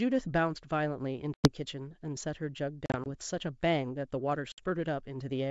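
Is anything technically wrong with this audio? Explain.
Yes. The speech has abrupt silent holes at 1.34 to 1.52 s (about 100 ms missing), 2.86 to 3.07 s (80 ms in short gaps, the longest 40 ms) and 4.52 to 4.63 s (60 ms). Each is followed by a click, a brief level jump or roughness. This is packet loss on an ADPCM call. Silence replaced the missing packets, and the receiver's adaptive predictor and step size drifted out of step with the sender's, so the sound returns distorted until they resync.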